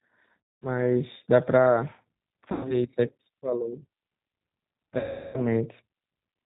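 G.729 codec compression runs throughout: the 8 kbit/s coder rebuilds speech from a filter and sparse pulses, cutting everything above 4 kHz and leaving a rough, synthetic edge.

VoIP packet loss concealed by the speech codec occurs at 0.56–0.67 s, 2.52–2.78 s and 4.98–5.50 s. The decoder stretches its last frame into a fading, buzzy tone or coloured noise, with about 210, 120 and 360 ms lost.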